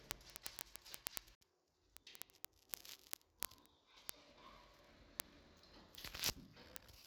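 From 0.11 to 7.06 s there are word clock ticks, a steady buzz of sharp clicks every 20 ms or so as the unlocked clocks drift apart by roughly 0.1 percent.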